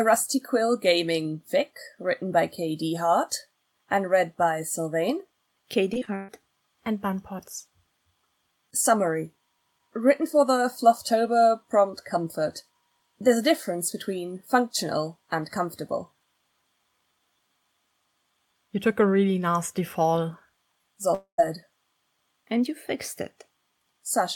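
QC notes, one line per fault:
5.93–6.30 s, repeated packet loss (robotic sound): four separate holes land within about 0.37 s, the longest 133 ms. Each one is patched by stretching the preceding sound, so roughly half of this span is concealment, about 190 ms in total, rather than real audio. Short patches alternating with brief returns of genuine signal give the choppy texture, with small pieces missing. Unlike a long dropout, the sound never fades out completely; it keeps breaking and recovering.
21.14–21.40 s, long network dropout: a single continuous hole of about 240 ms. The last sound is held and smeared for most of it, then decays, leaving about 100 ms of silence before the audio resumes further on, with the lost portion never heard. The likely cause is one sustained interruption in delivery. It differs from repeated packet loss because there is one long fade into silence, not a rapid stutter of small gaps.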